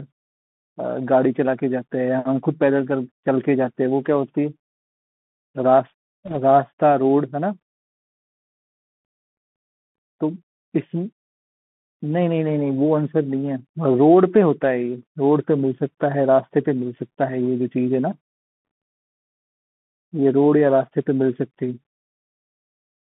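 Throughout, the speech carries the Bluetooth CVSD headset codec: a one-bit delta coder squeezing audio into a 150 Hz to 3.4 kHz band, giving scratchy s sounds and granular hiss. On a spectrogram, energy stops sharply above 3.4 kHz.

From 6.25 to 6.37 s, bit errors on the Bluetooth voice link, at about one to two percent, add a brief rushing crackle. This shows as a smear of broadband noise with no single spikes.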